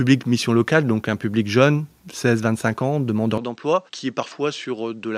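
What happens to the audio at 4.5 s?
Input switched to a poorer device from 3.38 s onward: likely a different microphone, passing nothing above 8.4 kHz, leaving the sound dull and about 10 dB quieter.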